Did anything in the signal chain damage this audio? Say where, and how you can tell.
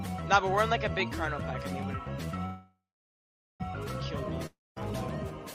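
Yes. From 2.45 to 3.62 s there is a call audio freeze, a network-stage fault whose likely cause is delayed packets draining the jitter buffer. The last sound is stretched into a fading buzz, then roughly 0.8 s of silence. On a spectrogram, smeared, repeating harmonics fade into an empty band. The waveform shows a decaying tail, then flatline. The sound resumes exactly where it stopped, so nothing is lost, but everything after it runs about 1.14 s late.

A long network dropout follows from 4.46 to 4.78 s. The last sound again decays into a brief hiss and then about 0.2 s of silence. This time the audio comes back past the break, skipping roughly 0.3 s of material. A spectrogram shows a short fading smear, a blank column, then an abrupt restart with no continuity across the cut. The waveform shows the same decay, flat stretch and sudden re-entry.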